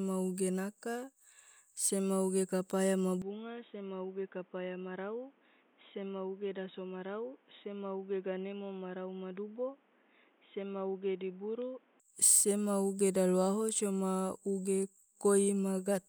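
The input was likely switched to a poorer device at 3.22 s, and back at 12.0 s. Across that stretch the speech turns dull and boxy with nothing above 3.8 kHz, drops about 10 dB in level, and carries new background noise some 30 dB down, with no gap at either switch.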